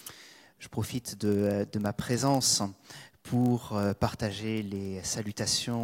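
A steady buzz at about 43.1 Hz runs under the audio for its whole length, and the sound plays back a hair slow, by about 0.1 percent, with its pitch essentially unchanged. This is a block size mismatch (padded). One stage hands over blocks a little shorter than the next stage reads, and the shortfall in each block is filled with zeros. That tiny silent gap recurs once per block, producing the buzz, and its rate fits a 1024-sample read block.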